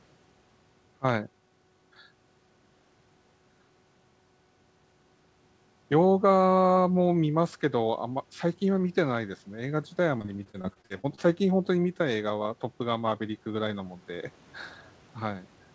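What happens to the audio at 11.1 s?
At 11.1 s the call is near the end of a stretch of repeated packet loss (robotic sound) running from 10.18 to 11.19 s. Packets kept arriving late or not at all, and about a dozen holes, the longest 38 ms, were each patched by stretching the last sound. About a quarter of that second is concealed fill, so the speech comes out choppy and robotic, with small pieces missing.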